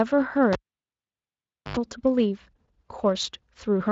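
A speech clip with a sharp pop at 0.53 s, then about 1.19 s of near silence, a brief 85 ms burst of 50 Hz mains buzz, and a second pop as the sound returns at 1.77 s. This is a cable pulled and plugged in while live: the buzz comes from the plug's tip touching before it seats. Underneath, the Speex coding sounds only lightly worn, with nothing above about 7.7 kHz.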